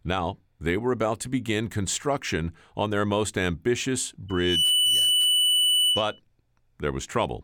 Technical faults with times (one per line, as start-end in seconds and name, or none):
4.28-6.20 loudspeaker feedback squeal